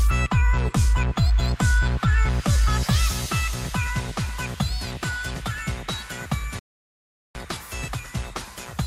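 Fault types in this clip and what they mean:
Playback stall: the sound cuts out mid-flow from 6.59 to 7.35 s, about 760 ms of silence, likely because the player ran short of data.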